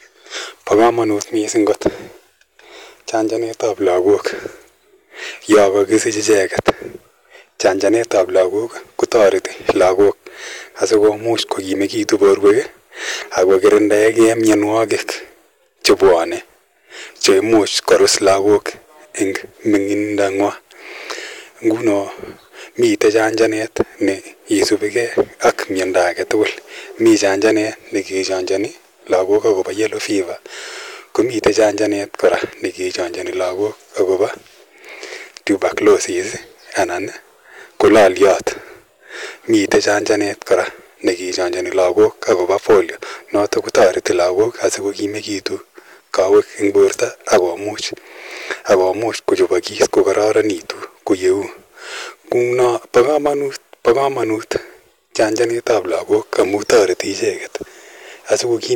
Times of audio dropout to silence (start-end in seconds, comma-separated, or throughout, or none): none